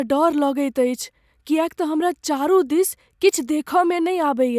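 No technical faults can be heard anywhere in this speech.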